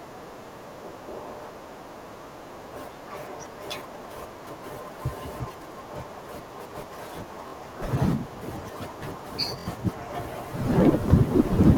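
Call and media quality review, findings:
Bluetooth stutter at 7.48–7.54 s and 9.59–9.67 s in speech: short buzzing repeats of one brief slice, then a jump ahead. The receiver replayed its last buffer while link packets were late or lost. About 46 ms and 70 ms of audio are missing.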